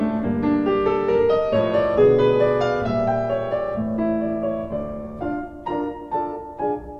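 No technical faults are audible.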